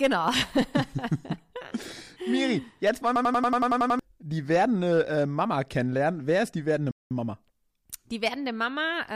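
A system hang loop runs from 3.16 to 3.99 s in this speech recording, right after "jetzt wollen" and before "die werdende äh". One 93 ms slice of audio repeats nine times at about 10.8 Hz, producing a rapid machine-gun stutter. This points to the system freezing while the sound hardware kept replaying the same ring buffer, which fits a 4096-sample buffer. Roughly 0.7 s of the real audio is lost while the loop plays. A playback stall follows at 6.91 to 7.11 s, just after "ist die werdende". The sound cuts out abruptly for about 197 ms and then resumes. The likely cause is the player running short of data or its output thread being blocked until it recovered.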